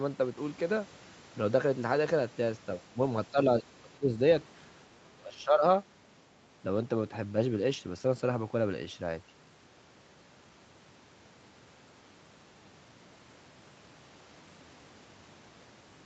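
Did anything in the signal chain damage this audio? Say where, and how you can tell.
Yes. The speech dips in level at 2.77–2.99 s, 3.31–4.17 s and 5.01–5.66 s, by up to about 20 dB. This is speech suppressed in double talk, likely from the call's echo canceller attenuating the near talker during overlap. The waveform envelope sags in patches, and the spectrogram shows faded, broken harmonics.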